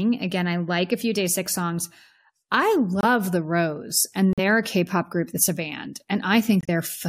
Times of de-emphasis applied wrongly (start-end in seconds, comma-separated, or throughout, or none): none